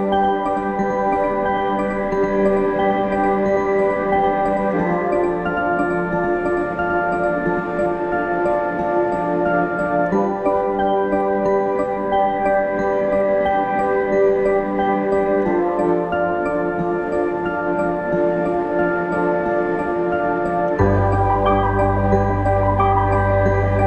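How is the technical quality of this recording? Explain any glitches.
The recording has one glitch, confined to its opening. From the very start until it stops abruptly at 7.86 s, a doubled audio track is heard: a second full-band copy trails about a tenth of a second behind, roughly 5 dB quieter, likely from an edit holding two out-of-step copies. Unlike echo or reverb, it repeats once, without decay or room colour.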